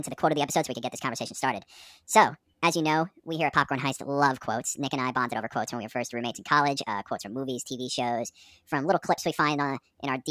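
Speech throughout, and the whole 10 s or so runs fast and high, a classic wrong sample rate problem. Everything plays about 1.45 times too quickly and sits roughly six and a half semitones sharp, so voices come out chipmunky and rushed. Speed and pitch shift together with no conversion in between, which fits audio captured at 22 kHz being played straight out at 32 kHz.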